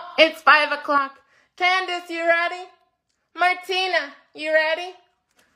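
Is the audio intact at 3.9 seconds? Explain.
No. At 3.9 seconds the audio is still inside a sudden gain jump that begins at 0.98 s and lasts to the end of the clip. At that instant the level drops by about 6 dB, and the sound and its background noise fall together rather than fading, so the whole signal sits at a lower level from there on. The likely cause is a digital gain setting, or a one-bit shift, applied without a ramp.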